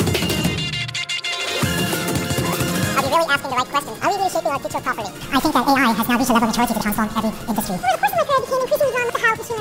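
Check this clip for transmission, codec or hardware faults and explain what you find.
One fault runs through the whole clip. The audio is read two samples at a time (double speed). Pairs of samples are taken as one frame, so everything plays twice as fast and 12 semitones higher.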